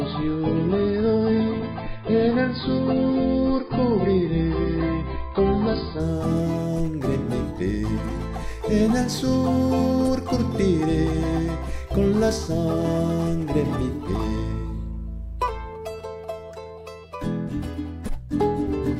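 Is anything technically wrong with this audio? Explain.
Yes. From 0 to 6.0 s this is an adaptive stream starting at a low bitrate: the player began on a thin version, with nothing above 5.1 kHz and stronger codec smearing, then stepped up once it had gauged the connection. The sudden jump to the treble with no gap sets it apart from a rebuffering stall.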